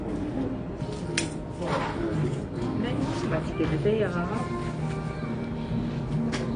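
A clip of sounds, dull and smeared throughout, with nothing above about 9.9 kHz and a warbling, fizzy texture, likely AAC compression at a low bitrate, around 32 kbps.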